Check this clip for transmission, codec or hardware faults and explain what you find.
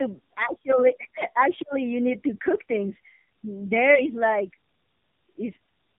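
One fault runs throughout: tandem speech coding. The speech passed through a low-rate narrowband codec twice, apparently AMR-NB near 8 kbit/s, each pass re-encoding the previous one's damage. It sounds rough, muffled and warbly, with nothing above 3.7 kHz. The compounded warble sets it apart from a single narrowband link.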